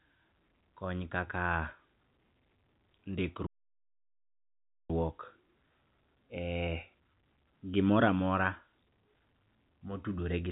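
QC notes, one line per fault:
3.46–4.90 s, playback stall: speech drops to silence for 1.43 s mid-flow, then resumes; likely the player ran out of buffered data or was blocked.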